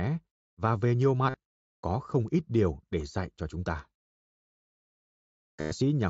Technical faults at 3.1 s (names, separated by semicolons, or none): none